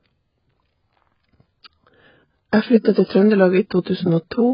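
Throughout, the speech sounds dull and smeared, with nothing above 5.2 kHz and a warbling, fizzy texture. The likely cause is heavy AAC compression at a bitrate near 12 kbps.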